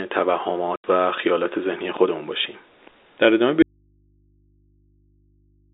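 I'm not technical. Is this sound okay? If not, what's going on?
No. At 0.76 to 0.84 s the speech is chopped by a sudden silent hole. This is packet loss filled with silence: about 80 ms of data went missing, which fits four 20 ms packets, and nothing replaced it.

From 3.62 s to the end, the speech abruptly vanishes and only a faint mains hum remains, far quieter than the speech before it. This is an audio dropout to a faint residue: the signal was most likely cut off while the rest of the line stayed open.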